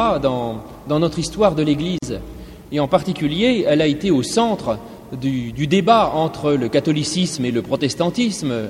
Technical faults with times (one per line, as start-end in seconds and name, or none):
1.98-2.02 gap at a join of encoded pieces